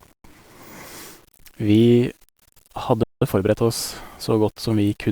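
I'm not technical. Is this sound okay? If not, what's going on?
No. There are three problems.

The whole recording has a rough, grainy texture, like fine sand in the sound. It is most noticeable in the quiet moments and the softer ends of the speech. This is low bit depth without dither. The audio was likely stored with too few levels of loudness, which fits 8-bit audio, and each sample was rounded to the nearest level. The rounding error follows the speech, so the grit rises and falls with it.

At 3.03 seconds the speech suddenly cuts out. Silence lasts until 3.22 seconds, about 0.18 seconds. This is a playback stall. The player likely ran out of audio data in time, or was briefly blocked, so it had nothing to send to the speakers. The gap is short but clear, because it lands in the middle of the flow of speech rather than at a natural pause.

From 3.22 to 3.58 seconds the speech sounds rushed, at about one and a half times normal speed. 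The pitch stays normal, so it doesn't sound squeaky. This is time-compressed catch-up. After the stall, the player skips tiny slices of audio and blends the joins to get back on schedule.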